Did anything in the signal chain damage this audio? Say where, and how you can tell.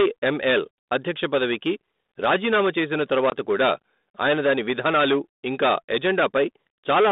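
Yes. Hard clipping runs through the whole clip, from start to finish. The speech was driven about 13 dB past what a gain stage, most plausibly the converter or a fixed-point sample-format step, could pass, so roughly a tenth of the samples are sheared off flat. Those squared peaks spray harmonics well above the fundamental, giving a constant harsh fuzz on every loud syllable rather than occasional crackle.

Packet loss on an ADPCM call hits the network stage at 3.30 to 3.32 s, between "అధ్యక్ష పదవికి రాజీనామా చేసిన" and "కూడా ఆయన దాని విధానాలు". A 20 ms hard-edged gap, which fits a single dropped packet, was filled with silence. The G.726 decoder at 32 kbit/s, whose 200 Hz to 3.7 kHz telephone band is audible throughout, lost track of the sender's predictor and step size. Speech therefore resumes slightly distorted before the decoder settles.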